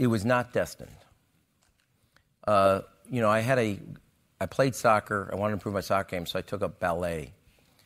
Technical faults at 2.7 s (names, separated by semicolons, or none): none